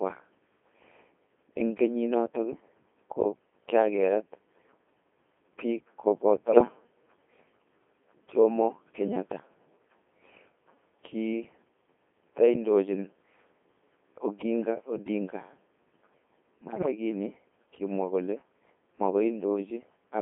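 Throughout this speech clip the voice sounds robotic and buzzy, confined to roughly 200 Hz to 3.5 kHz and heavily damaged, with no natural texture left. That is the Codec 2 vocoder: rather than keeping the waveform, it transmits only pitch, voicing, energy and a coarse spectral envelope, and the decoder rebuilds the voice from sine waves. The thin, synthetic character fits its 2.4 kbit/s mode. Two short bursts break into bleeps, warbly pitch and level jumps and garbled robotic sound, from 6.48 to 6.68 s and again, longer and worse, from 16.62 to 16.92 s. These are bit errors on digital voice radio. At such a low rate every flipped bit sets the pitch, level or tone of a whole frame, so an error rate of a few percent in the first burst and noticeably higher in the second turns the synthesis to gibberish.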